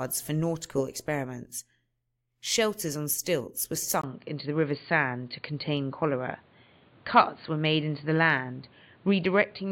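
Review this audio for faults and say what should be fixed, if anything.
At 4.0 s the speech drops out for about 20 ms, then continues to the end with nothing above 4.7 kHz, a level shift of roughly 5 dB and a new, faint noise floor. That points to the input likely switched to a poorer device. A bandwidth-limiting filter would not bring a new noise floor or a gap at the switch. Locking the recording input to one device for the whole session prevents this.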